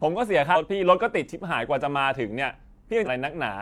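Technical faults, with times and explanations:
0.51–0.57 s and 3.02–3.08 s, damaged data in a compressed stream: two short garbled blips in the speech, each about 55 to 60 ms long. Some of the coded frames there were corrupted, so the decoder read nonsense as if it were valid audio, or dropped those frames, lost sync, and hunted for the next clean frame header before carrying on. That brief stretch of misdecoded data is what comes out as the glitch.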